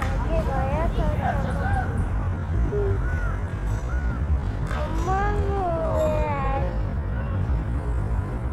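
Sounds, with a time-stretched section from 2.12 s to the end. The pace drops abruptly to about half speed while the pitch holds. Software likely slowed it by repeating short pieces to fill more time.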